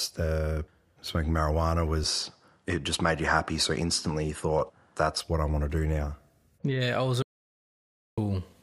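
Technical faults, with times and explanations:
2.04–5.21 s, input switched to a poorer device: after "the smoking marijuana" the top end vanishes above 11.4 kHz, no gap, same level, likely another mic, clearing by "what I want to".
7.22–8.18 s, audio dropout to silence: right after "I was" everything drops to dead silence for about 0.95 s, no room tone, likely the input link failing.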